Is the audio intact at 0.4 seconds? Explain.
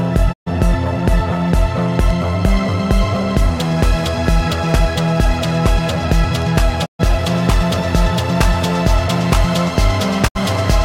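No. A digital broadcast dropout runs from 0.32 to 0.48 s: failed frames made the receiver mute, so the sound fades out over about 20 ms and 128 ms is lost.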